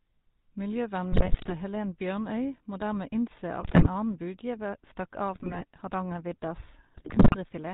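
Throughout, the GSM full-rate codec lends the speech a buzzy, gravelly roughness that fits 13 kbps coding; the spectrogram shows nothing above 4 kHz. GSM bit errors at 1.12–1.53, 3.60–3.87, 5.34–5.65 and 6.94–7.36 s corrupt decoder parameters, producing squawks and gargling, with level spikes and smeared, distorted bands per frame.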